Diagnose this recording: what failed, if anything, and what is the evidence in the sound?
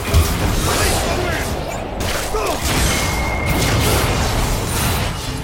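Nothing in the signal chain points to a failure at any stage, from the analogue wiring through to playback.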